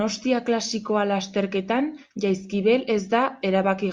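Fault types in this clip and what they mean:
No audible faults occur anywhere in this speech recording.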